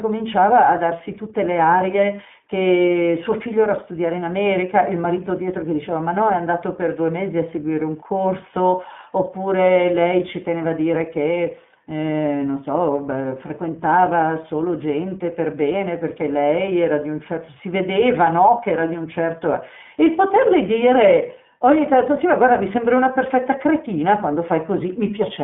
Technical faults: iLBC codec; lost iLBC frames

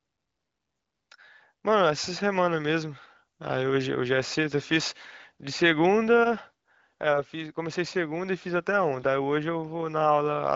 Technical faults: none

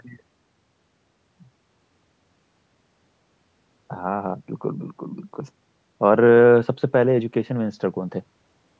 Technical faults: none

